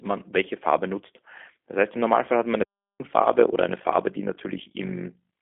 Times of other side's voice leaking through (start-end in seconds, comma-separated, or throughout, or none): none